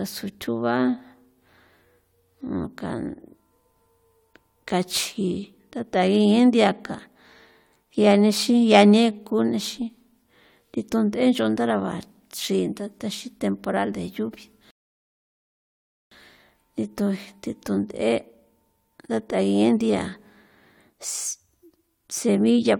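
At 14.71 s the speech just drops into silence until 16.12 s, then picks up exactly where it left off. That's a rebuffering stall: the player ran dry of downloaded audio and waited, so nothing's missing but about 1.4 s of dead air gets added.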